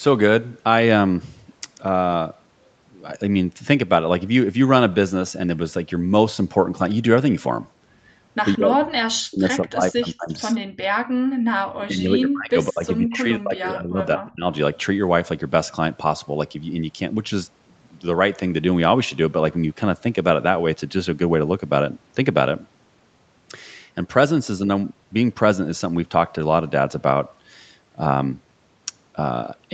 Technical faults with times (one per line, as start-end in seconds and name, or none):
8.55-10.31 speech suppressed in double talk
10.60-11.39 background gated by the echo canceller
11.67-14.46 speech suppressed in double talk